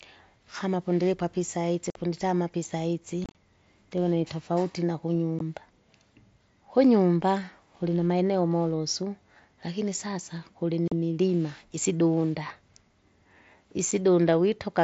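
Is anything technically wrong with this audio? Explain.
Yes. There is unconcealed Bluetooth headset packet loss at 1.90 s after "pundilipwa apa isazi", 3.24 to 3.35 s before "ndivona itofauti", 5.39 s, 10.88 s after "kilinamaeneo molosu lakini sasa", and 13.91 s. Voice packets from the headset dropped and silence or an idle pattern replaced them. Each loss is a hard-edged hole. The one at 3.24 s is scattered and sounds chopped.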